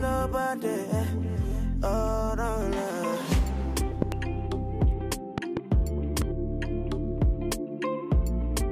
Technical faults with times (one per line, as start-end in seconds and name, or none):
4.02-4.14 loud pop
5.38-5.59 loud pop
6.22-6.24 loud pop